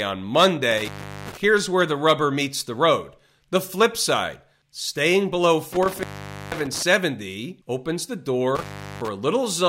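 Intermittent contact cuts the speech three times: 0.71–1.44 s, just before "where the rubber meets"; 5.73–6.82 s; and 8.55–9.08 s, right after "opens the". Each time a loose connection opens for roughly 0.4–0.5 s, dropping the signal to faint hiss with crackle at both edges. On a waveform these show as flat gaps framed by sharp spikes. On a spectrogram they are near-empty bands bordered by broadband vertical streaks.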